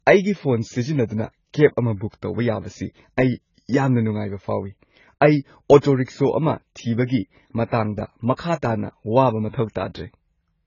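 From start to end, the speech sounds dull and smeared. Nothing is heard above 7 kHz, so sibilants lose their edge and turn fizzy. Sustained sounds warble, and the top of the spectrum seems patchy, with holes and a thin noisy wash. The cause is likely heavy AAC compression, AAC-LC at a low rate that fits about 16 kbps. With so few bits, the encoder lowers its cut-off and coarsely quantises what remains.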